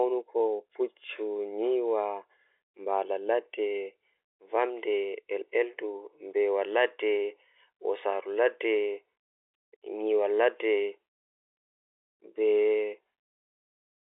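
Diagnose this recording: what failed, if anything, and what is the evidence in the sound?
Nothing has failed here: the speech sounds exactly as ordinary G.711 telephone coding should, sitting in the familiar phone band of roughly 150 Hz to 3.6 kHz with nothing above about 3.8 kHz, just what a standard 64 kbps mu-law line delivers.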